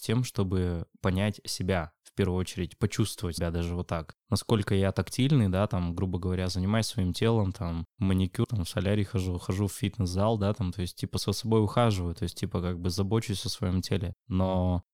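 Speech with compressed frames skipped at 3.37, 8.43 and 11.17 s, jumping ahead roughly 150, 70 and 20 ms, consistent with 23 ms frames. Each one is a sudden jump ahead in the speech where whole frames were left out.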